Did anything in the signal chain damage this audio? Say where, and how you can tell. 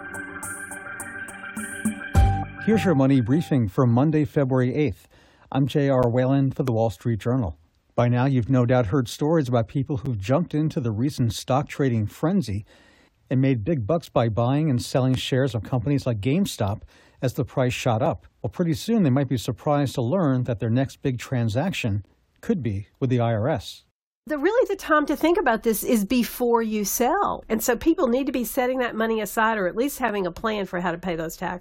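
Yes. At the playback or streaming stage there is a gap between stream segments at 2.03, 6.03, 10.06, 14.06, 18.06, 22.06, 26.09 and 30.08 s. That is one every 4 s, which fits 4-second segments whose timestamps leave a gap of roughly 3 to 12 ms that the player fills with silence. On the waveform each one is a hard-edged flat line. On a spectrogram it is a thin blank vertical stripe.

There are also two loud pops, at 6.68 to 6.70 s and 15.14 to 15.16 s, peaking about 10 dB above the surrounding sound, which carries on beneath them. The waveform shows a tall isolated spike. The spectrogram shows a broadband vertical streak. The likely cause is an electrical transient, such as a switch, plug or static, in the analogue wiring.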